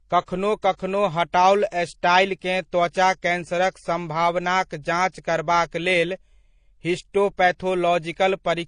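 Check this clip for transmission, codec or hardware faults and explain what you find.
One fault runs through the whole speech clip. Transcoding between lossy codecs, throughout: nothing is present above 9.8 kHz, and smeared, warbling artefacts of two different kinds sit together. This likely comes from an MP3 encode at around 48 kbit/s re-encoded to AAC-LC near 32 kbit/s. The second codec spent bits on the first codec's damage and added its own.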